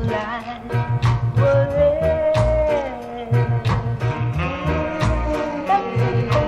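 No technical faults occur at any point in this audio.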